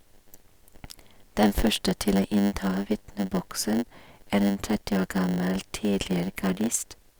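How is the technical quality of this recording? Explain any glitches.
The recording has one fault, present from start to finish. A block size mismatch (padded): one stage hands over blocks slightly shorter than the next stage reads, and zeros fill the remainder. Those tiny gaps recur 100 times a second, producing a steady 100 Hz buzz under the speech, and the audio plays at about 0.92 times normal speed while keeping roughly its natural pitch.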